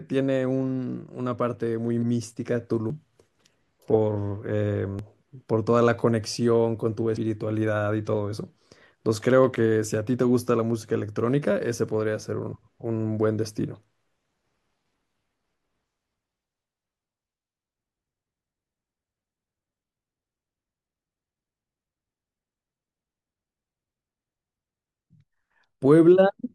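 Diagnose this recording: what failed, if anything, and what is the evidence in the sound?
Dropped buffer (overrun) at 2.90, 4.99 and 7.17 s: each is a point where the speech jumps ahead without a gap, losing roughly 100, 40 and 150 ms. Likely the capture software fell behind at the driver and buffer stage, letting hardware overwrite unread samples.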